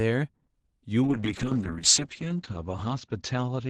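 From 1.04 s, a call bitrate drop starves the encoder, making the speech coarse and muffled. On a spectrogram, the top edge falls from 12 kHz to 8 kHz.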